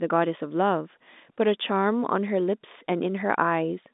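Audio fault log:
No faults heard; telephone-band speech, nothing above 3.8 kHz.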